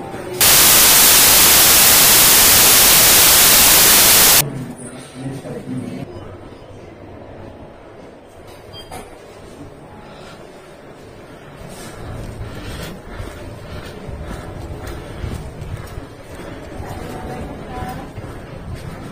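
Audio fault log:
0.41–4.41 s, samples built from the wrong bytes: for four seconds the sound turns into loud, harsh broadband noise, because each sample's bytes are assembled out of order or offset, so the rapidly changing low bits dominate.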